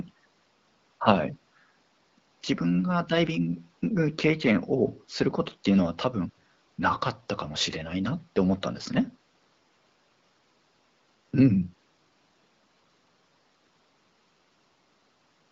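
No technical faults are audible.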